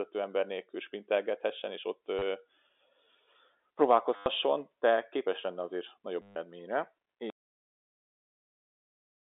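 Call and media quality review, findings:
Packet loss with last packet repeated, three events: 2.19 to 2.22 s (30 ms), 4.16 to 4.26 s (100 ms), 6.22 to 6.36 s (140 ms). Receiver replayed the last packet. The two longer runs give a robotic stutter. Lengths fit 10 ms packets. Jitter buffer or network path.

Audio dropout to silence from 7.3 s to the end. Sound cuts out mid-flow. The gap is silent with no room tone. Likely cause is lost input: a disconnected device, a failed link or a stray mute. The recorder kept writing silence.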